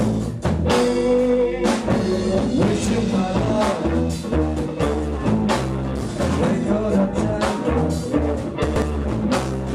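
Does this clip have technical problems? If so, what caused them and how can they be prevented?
Yes. Between 8.64 and 8.82 s there are chunks out of order. A 60 ms chunk arrived two chunks late, so it plays after the two chunks that should follow it, and that 180 ms span sounds briefly jumbled. No audio is lost, but there are three hard joins. Prevent this by adding a sequence number to every chunk and having the receiver's jitter buffer reorder chunks before playback.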